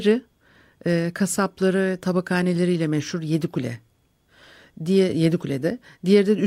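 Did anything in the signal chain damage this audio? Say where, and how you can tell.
No, nothing in the chain damaged this audio.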